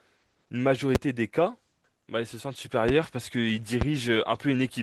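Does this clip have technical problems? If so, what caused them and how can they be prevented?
Yes. Loud pops at 0.95–0.98, 2.89–2.91 and 3.81–3.84 s, single sharp spikes up to about 20 dB above the speech, likely from a voltage transient from a connector, switch or static. Securing cables, using grounded gear and muting before switching prevents them.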